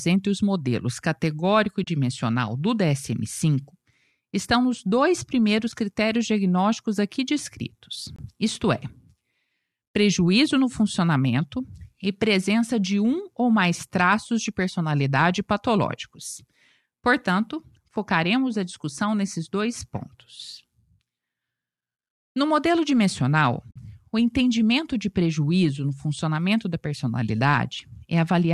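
At 1.84 to 1.87 s the speech sinks into a brief, soft-edged hole about 30 ms long. This is AAC frame loss with muting: the decoder zeroed the spectrum for the missing data, and the overlapping windows fade the sound down and back up. The length fits three lost frames of about 10 ms each. On a waveform this appears as a tapered dip, and on a spectrogram as a narrow vertical band emptied across all frequencies.

At 5.72 s the same fault recurs for only about 10 ms, consistent with a single lost frame. It is heard as a tiny dropout rather than a gap.

At 8.16 to 8.19 s there is a block of digital silence about 23 ms long. Here the samples were replaced outright with zeros, which fits a 1024-sample buffer that was not filled in time. The audio cuts out and back with no fade. The waveform shows an abrupt flat line with vertical walls, and the spectrogram shows a sharp-sided empty slot.

At 23.71 to 23.76 s a longer AAC frame loss with muting leaves a soft hole of about 50 ms, or roughly five frames. 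It is the longest of the three, with tapered edges on the waveform. The underlying sound carries the light texture of its likely low-delay AAC-ELD compression at 64 kbps.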